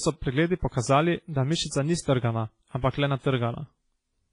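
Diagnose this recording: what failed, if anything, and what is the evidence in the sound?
WMA compression damage runs through the whole clip, at the codec stage. The speech has a washy, ringing quality with hiss that swells and fades with the signal, and nothing sounds above 10.2 kHz. The heavy smearing likely points to a low bitrate, around 24 kbps.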